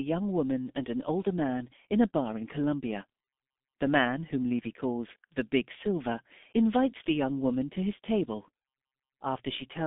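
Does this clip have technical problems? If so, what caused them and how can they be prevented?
Yes. The speech is heavily damaged by the G.723.1 codec from start to finish. Nothing is heard above about 3.6 kHz, and the band sits roughly between 200 Hz and 3.6 kHz. Voices sound muffled and hoarse. Consonants smear together. The codec models the voice in 30 ms frames at a very low rate, which fits its 6.3 kbit/s mode. Much detail is thrown away, and the model cannot follow fast changes. To prevent this, record or send the speech through a wideband codec at a higher bitrate.

A single sharp click sits at 5.42 s, right after "calls the". It is a short tick with no gap in the sound. The cause is likely dropped samples. A very brief piece of the stream went missing, which fits the loss of about one sample, a tiny fraction of a millisecond. The waveform jumps straight to a later value, and that step makes the click. 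To prevent it, use larger audio buffers and steady clocking so no samples are skipped.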